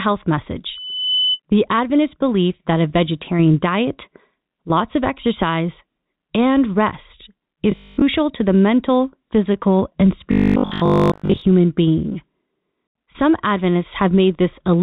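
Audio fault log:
0.68–1.40 s, loudspeaker feedback squeal: a steady 3 kHz tone swells over about half a second until it is about as loud as the speech, which points to a microphone picking up its own loudspeaker with loop gain above one at that frequency.
7.72–8.04 s and 10.32–11.42 s, robotic sound from repeated short buffers: the speech turns into a rigid, metallic 50 Hz buzz, likely because audio arrived too seldom and short segments were replayed over most of the real signal. A 50 Hz repeat rate fits 20 ms buffers.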